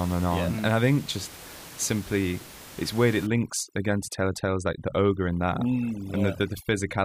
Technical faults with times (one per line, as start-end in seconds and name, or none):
3.27-7.04 overdone noise removal